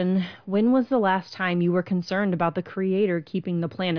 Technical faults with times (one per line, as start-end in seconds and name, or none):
none